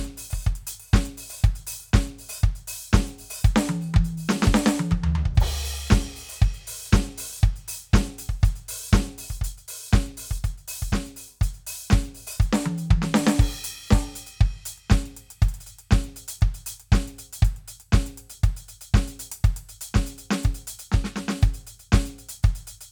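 No technical faults occur at any point in the music, so there is nothing to describe in time order.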